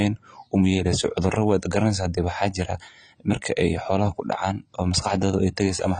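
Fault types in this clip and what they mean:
AAC compression: The speech runs through the whole clip with a hard ceiling at 9.3 kHz and plainly audible coding damage, most likely from low-bitrate AAC-LC, with the degradation fitting roughly 24 kb/s. The encoder quantises each frame's spectrum against a hearing model and, short of bits, drops everything above its cut-off. On a spectrogram there is an empty band above 9.3 kHz from start to finish. The waveform shows nothing obvious.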